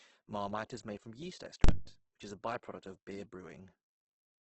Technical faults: Opus compression; invalid numbers at full scale

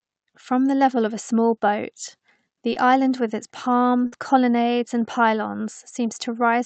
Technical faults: short concealed packet loss; lost packet rebuilt from error correction; burst of packet loss

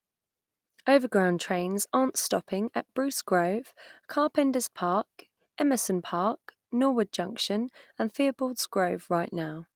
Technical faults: none

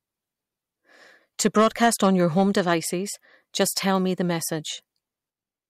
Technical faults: hard clipping

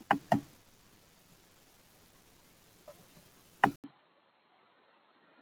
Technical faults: input switched to a poorer device

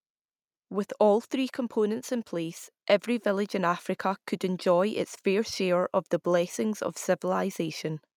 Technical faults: automatic gain rising

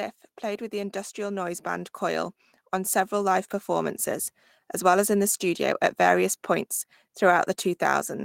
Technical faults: automatic gain rising

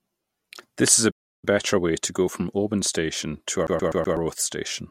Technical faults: playback stall; CD stuck on one turn

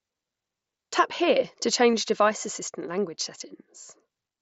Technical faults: concealed Bluetooth headset packet loss

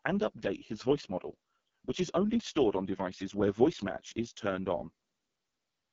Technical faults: AMR wideband (HD Voice) codec

